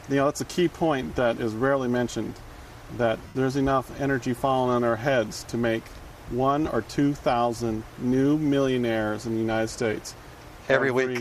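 Lost LE Audio frames at 3.28 to 3.35 s, a gap of about 75 ms, and again at 5.43 s, about 7.5 ms. During each loss the decoder fills the gap by replaying the last good spectrum with randomised phase signs, so any tonal content smears into a brief noisy wash. In the longer gap this concealment fades as it goes, which fits ten consecutive 7.5 ms frames being dropped. The light coding loss elsewhere in the audio is slight and not part of this fault.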